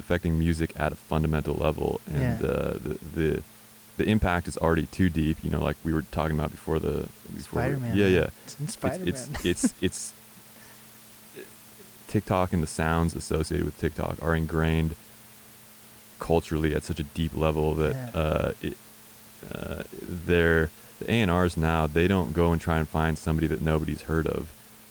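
Nothing technical goes wrong in this speech recording, and the only thing in the background is the room's own noise, sitting about 24 dB below the voice.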